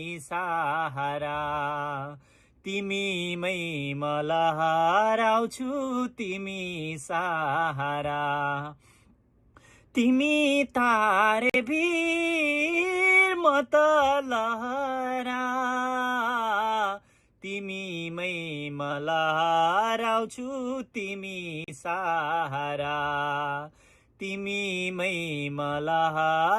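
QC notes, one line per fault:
11.50–11.56 s and 21.64–21.70 s, Bluetooth stall: the audio drops to dead silence for about 46 ms the first time and 37 ms the second, then carries on. That's likely the headphones running their buffer dry while interference held packets back. Nothing plays until the resent data shows up, so you get a clean hole in the sound rather than crackle or distortion.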